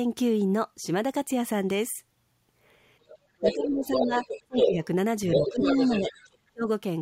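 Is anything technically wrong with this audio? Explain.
Yes. There are two related echo-control faults from about 3.1 s onward in this speech clip.

The other side's voice leaks through at 3.08–3.16 s (faint, well below the talker), then at 3.44–3.55 s, 3.92–4.68 s and 5.32–6.37 s at roughly equal level. The likely cause is the far end playing over a loudspeaker, with echo cancellation leaving residual echo in the microphone signal.

The talker's speech is suppressed in double talk at 3.4–4.21 s, 4.44–4.82 s, 5.33–6.08 s and 6.51–6.67 s, with dips ranging from roughly 10 dB to roughly 30 dB. It sounds like the talker ducking or breaking up while the other voice overlaps. The likely cause is the canceller failing to separate the talker from the echo and attenuating both.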